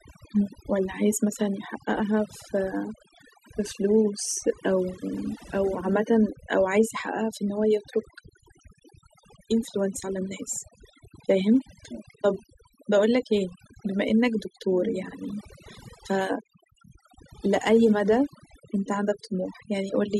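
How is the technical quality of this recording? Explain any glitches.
The recording is compromised by one fault that runs through the whole clip: overdone noise removal. Gaps between phrases fall to near silence scattered with twinkling specks. A noise reduction stage set too aggressively is cutting individual frequency bands hard whenever they approach its noise estimate, taking the quieter parts of the voice along with the noise.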